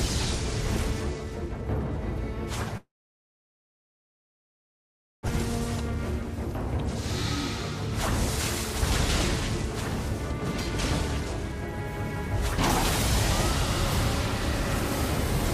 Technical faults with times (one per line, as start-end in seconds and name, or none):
2.77-5.29 long network dropout